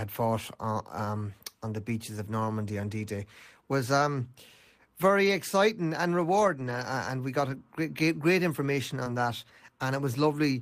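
Speech, with a few lost packets rebuilt from error correction at 5.23–5.33 s, at 6.59–6.81 s right after "exciting and", at 7.49–7.55 s just before "great great information", and at 9.06 s. Each time the decoder played a rough low-bitrate backup copy carried in the next packet, so there's no gap, just short grainy, noisier patches. There's also a short concealed packet loss at 9.03–9.08 s, after "great great information", where the receiver extended the preceding sound to cover the missing bit and then blended back, leaving a brief smear.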